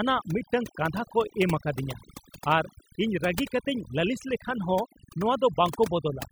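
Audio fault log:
throughout, overdone noise removal: aggressive noise reduction switches off bands near the noise estimate, leaving twinkling specks over near-silence and quiet parts of the voice removed, unlike steady low-pass dullness.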